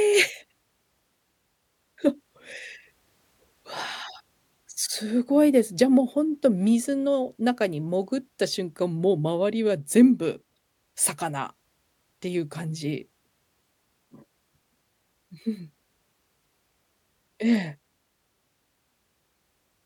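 No technical faults can be heard anywhere in this speech recording. Nothing in the audio chain draws attention to itself at any point.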